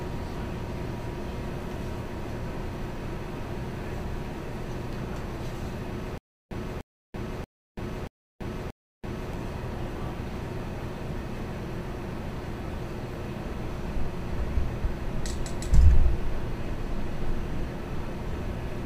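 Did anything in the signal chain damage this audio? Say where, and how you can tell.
Yes. A stutter with silent gaps runs from 6.18 to 9.34 s: one short burst of about 298 ms replays five times, each followed by roughly 334 ms of dead digital silence, giving a steady cycle near 632 ms. This is likely a stalled playback or streaming buffer. Each time it retried, it re-sent the last fragment it held and then ran dry, so the audio meant for that stretch never arrived and is gone.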